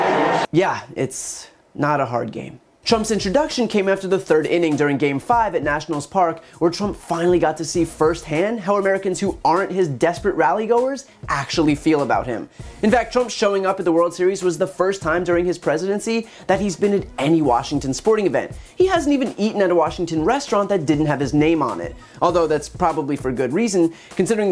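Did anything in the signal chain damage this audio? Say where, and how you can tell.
No, nothing in the chain audibly damaged this audio; there are no dropouts, clicks, distortion, level jumps or dulling anywhere to trace back to a stage.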